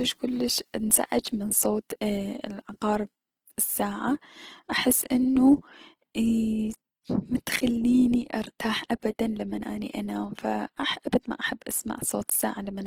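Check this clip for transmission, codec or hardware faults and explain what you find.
One codec fault runs through the whole clip: Opus compression, likely at a low bitrate near 16 kbps. Its music mode fills starved bands with folded or noise energy, so the speech turns grainy and rough rather than swirly like MP3, with the band still reaching about 20.2 kHz.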